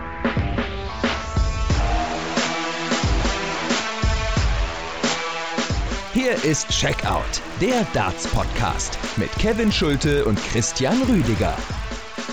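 From 5.96 s to the end, a 50 Hz buzz rides on the sound wherever signal is present. This is a resampler restarted on every block. Each 20 ms block was converted from 16 kHz to 48 kHz separately. Every block edge carries a small error, repeating fifty times a second.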